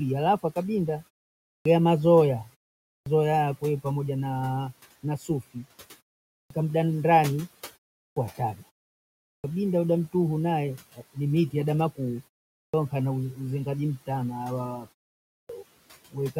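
At 1.48 s, right after "halafu akabinda" and a short pause, speech resumes with a clipped start after a pause. The output device has dropped into sleep during the silence, and about 170 ms of onset is lost before it wakes. The same happens at 2.9 s. On a waveform each restart begins abruptly with no rise.

From 5.03 to 5.66 s, speech cut by the noise suppressor turns soft sounds down by up to about 14 dB, around a fifth of a second in all. They sound faint or swallowed, and the spectrogram shows thinned patches sinking toward the room noise floor.

Further clipped starts follow at 6.33, 8.01, 9.29 (before "ada mtuhu naye"), 12.57 (between "ni miti adama kuu" and "nkana uzengaji mtana") and 15.33 s. Each comes after a 0.3 to 0.7 s pause and loses 150 to 175 ms, leaving a hard vertical edge where the onset should be.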